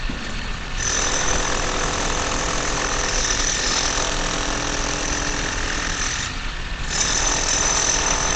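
Opus compression, throughout: nothing survives above 8.9 kHz, and the sound is muffled and hoarse, likely from a low-rate speech mode near 16 kbps.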